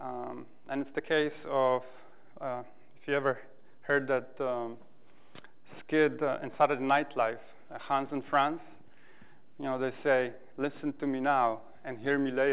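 No technical faults can be heard in this audio. It has passed through a WebRTC call path that is working normally, and nothing is present above 4 kHz, which fits a narrowband telephone codec such as G.711 mu-law at 64 kbps.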